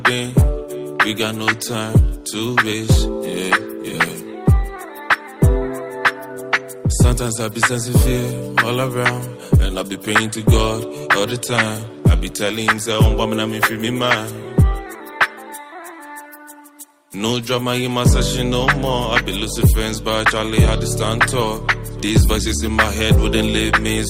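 No technical faults can be heard anywhere in this audio. Nothing in the sound calls for a fault description.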